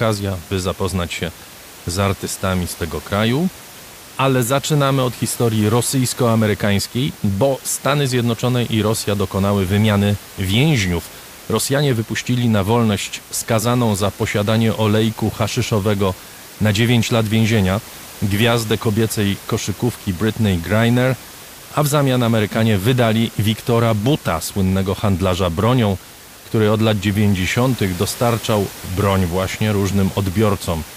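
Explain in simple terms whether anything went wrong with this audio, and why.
Nothing went wrong with this speech recording. There is some quiet background noise from the room, which sits well below the talking and belongs to the recording itself rather than to any problem with the system.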